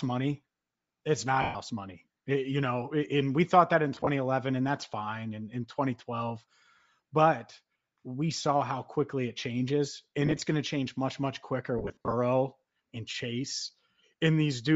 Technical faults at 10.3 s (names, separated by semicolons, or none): Bluetooth LC3 compression; lost LE Audio frames